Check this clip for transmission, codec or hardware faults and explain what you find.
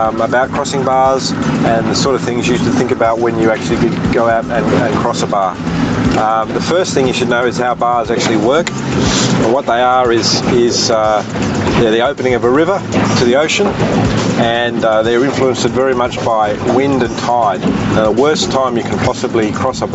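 One fault runs through the whole clip: gain pumping. The level swings by around 15 dB, squashing loud and soft parts together. The likely cause is input gain set far too high, with a fast limiter clamping down on every peak. The sound arrives through a call codec whose content stops near 8 kHz.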